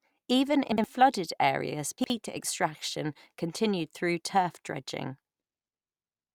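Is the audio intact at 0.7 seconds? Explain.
No, chunks out of order disrupt the speech from 0.72 to 0.84 s, just before "flooded areas". A 60 ms chunk of audio arrived one chunk late, so it plays after the chunk that should have followed it. Nothing is missing, but the two pieces swap places, leaving three abrupt joins where the waveform jumps. The result is a brief jumbled, garbled moment.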